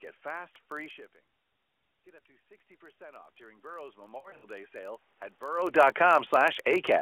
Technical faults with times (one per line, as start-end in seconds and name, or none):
0.00-7.02 block size mismatch (padded)
2.04-5.12 automatic gain rising
4.18-4.45 lost AMR speech frames